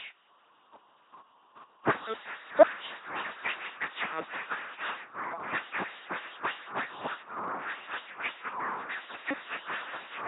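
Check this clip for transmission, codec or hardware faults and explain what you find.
One codec fault runs through the whole speech clip. LPC-10 vocoder, throughout: each frame drives a ten-pole vocal-tract filter with either buzz pulses or noise, giving heavy robotic buzzing and misplaced hiss, nothing above 3.8 kHz, consistent with 2.4 kbit/s.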